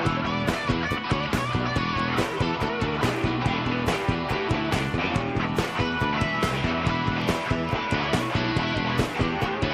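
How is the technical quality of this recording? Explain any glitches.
There is one glitch, a block of digital silence at 7.22 s. It lasts about 0.54 ms. The sound drops to nothing and returns with no fade. A gap this short is heard as a tick, not as silence. Either the output buffer was not filled in time or a calculation produced invalid numbers.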